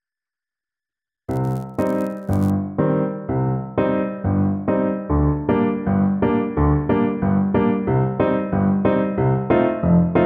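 A filter restarted on every block runs from 0 to 2.51 s: the processing loses its memory at each block boundary and begins again from silence, so every block opens with a small transient. Those repeated clicks fuse into a buzz at about 86.1 Hz, which fits a 512-sample buffer. The buzz rises and falls with the level of the sound passing through the filter, then stops after 2.51 s.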